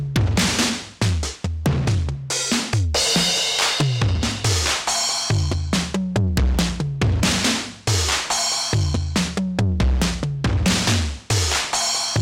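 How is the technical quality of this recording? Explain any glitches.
The recording is marred by integer overflow, with loud peaks wrapping to the opposite sign at 0.16–0.39 s, 1.66 s, 3.80 s, 6.37–6.59 s, 7.24 s, 10.02 s and 10.68 s. These are harsh, violent cracks, far sharper than clipping, and on a waveform they appear as sudden full-range jumps with vertical spectrogram streaks.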